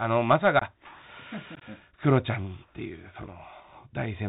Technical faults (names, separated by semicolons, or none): Bluetooth CVSD headset codec; unconcealed Bluetooth headset packet loss